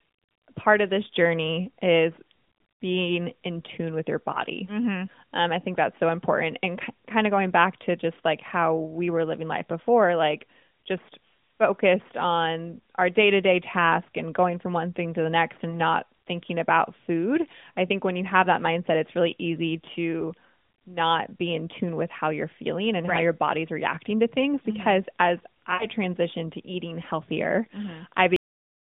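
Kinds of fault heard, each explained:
lost AMR speech frames: corrupted radio frames replaced by decoder extrapolation; at 15.70 s one 20 ms frame gives a brief dip or warble after "thing to the next", at 25.74 s three frames (60 ms) smear and fade before "transitioned to eating healthier", visible as a smeared, dimming spectrogram patch.
cut-off end: final buffers never played, so the sound stops mid-utterance at 28.36 s, dropping straight to digital silence with no decay, a hard flat line on the waveform.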